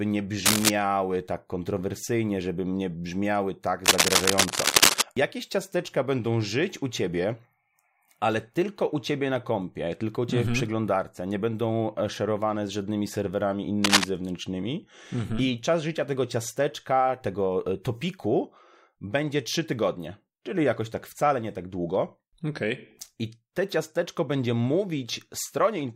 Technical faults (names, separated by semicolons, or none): cable scratch noise